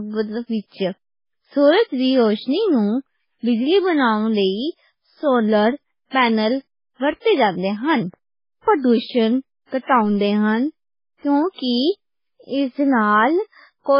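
Throughout the speech, nothing remains above 5.3 kHz, and what is left sounds watery and swirly, with chirping s sounds and smeared onsets. This is likely heavy MP3 compression at a very low bitrate, around 16 kbps. A spectrogram shows a hard ceiling at 5.3 kHz and flickering gaps in weaker bands.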